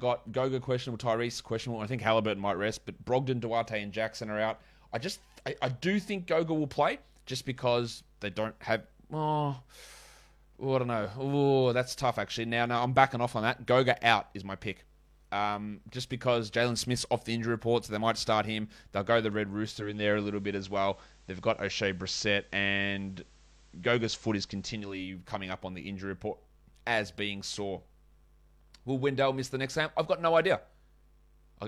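At 19.63 s, just before "coming up on the", the receiver loses its digital signal and performs a digital radio blend to analogue, cross-fading over about 487 ms to the FM broadcast of the same station. On FM the level shifts by about 2 dB, and a faint hiss sits roughly 35 dB below the signal. At 25.17 s it blends back to digital.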